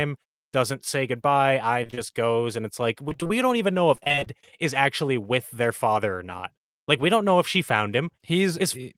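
Repeated packet loss (robotic sound) hits the speech three times: 1.83 to 1.99 s just after "say goodbye", 3.09 to 3.31 s before "don't even know", and 3.95 to 4.28 s before "is actually with their". In each stretch, dropouts of up to about 24 ms follow one another closely. Each is patched by extending the preceding sound, so about half the span is concealed and the voice turns choppy. A spectrogram shows smeared, frozen harmonic bands alternating with breaks, and a waveform shows repeated, stuttering cycles.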